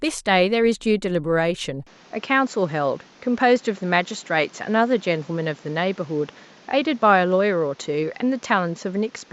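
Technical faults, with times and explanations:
1.87–9.33 s, input switched to a poorer device: from 1.87 s to the end the speech abruptly loses everything above 7.6 kHz and takes on a duller, boxier tone. There is no gap at the changeover and no jump in loudness, but a new background noise appears about 30 dB under the speech. That fresh noise floor and changed colouration, not just a band limit, point to a likely switch to a poorer input device rather than a filter or codec change.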